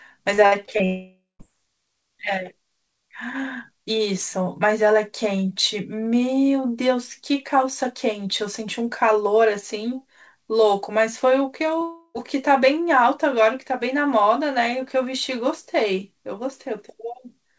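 From 0.34 to 0.81 s the connection hit repeated packet loss, with four holes up to 59 ms long. Each was patched by extending the previous sound, so more than a quarter of this stretch is synthetic, giving a choppy texture with bits missing.

At 0.85 s the sound turns into a fading buzz, then goes quiet, and it resumes at 1.41 s with about half a second gone. This is most likely a long network dropout. The final 0.18 s before the return is silent.

At 11.79 to 11.83 s there is a short concealed packet loss. A brief hole was bridged by extrapolating the preceding sound, leaving a quick smear or wobble.

Immediately after, from 11.83 to 12.16 s, a second long network dropout is the likely cause of another gap of about a third of a second. It is heard as a decaying continuation with a short silence at its end. Throughout, the call path's G.722 coding leaves nothing above 8 kHz.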